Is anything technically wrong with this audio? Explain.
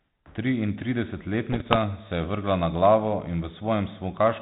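Yes. From 1.52 to 1.77 s, just before "se je vrgla na", the speech breaks into pops and a rough, gritty burst with brief jumps in level. These are bit errors on an ADPCM link, here the 32 kbit/s G.726 path whose 4 kHz band limit is audible throughout. At an error rate of around one or two percent, each flipped bit corrupts the decoder's step size and predictor, so the damage rings on for several milliseconds instead of staying a single click.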